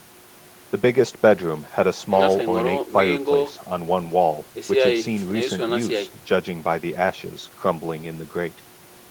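No technical faults are audible anywhere in the speech recording.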